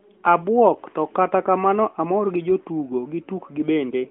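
No technical faults detected here.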